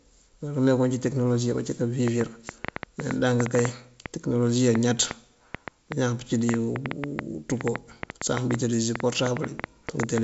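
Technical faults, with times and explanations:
2.08 to 10.19 s, train of clicks: starting right after "tekënolosi abací", roughly fifty similar sharp pulses tick over the speech at an irregular pace averaging about 5.7 per second. They peak about 15 dB above the speech and carry on through the pauses. Because they are repeated, alike and independent of the signal, they are not codec damage or clipping crackle. The likely cause is interference from nearby equipment or a faulty connection or power supply. The G.722 coding at 64 kbit/s adds no comparable artefacts.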